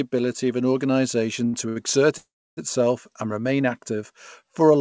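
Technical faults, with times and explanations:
1.46–1.55 s and 1.69–1.78 s: short stall from a late packet. The speech is held for about 70 ms each time while the empty jitter buffer waits, then resumes intact.
2.18–2.59 s: call audio freeze. The sound turns into a fading buzz, then about 300 ms of silence, likely from delayed packets draining the jitter buffer, before continuing unbroken.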